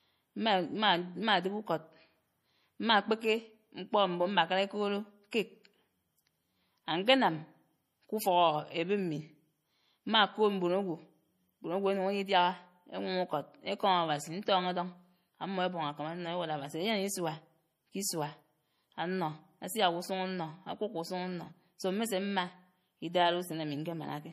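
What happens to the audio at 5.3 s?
Pre-echo at 5.31 s: a short hiss, about 17 ms long, arrives just before a sharp attack in the speech. A transform codec spreads its quantisation noise evenly across a whole block, so when the onset falls late in that block, noise sized for the loud attack also fills the quiet instant ahead of it. The result is a brief smear of hiss in front of the onset, and the attack loses some of its crispness.

Around that moment, as through the whole clip, the audio has a watery, swirling quality, and nothing is heard above 15 kHz. This is likely MP3 compression at a low bitrate, consistent with about 40 kbps. The encoder cuts the treble at a fixed point and drops weak frequency components that switch on and off from frame to frame, which gives sibilants a metallic, chirpy edge and softens transients.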